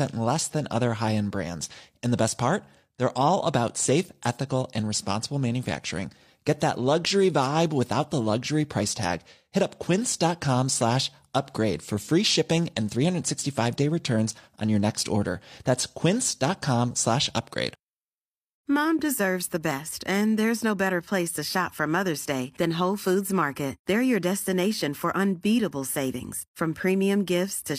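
No technical faults can be heard anywhere in this recording.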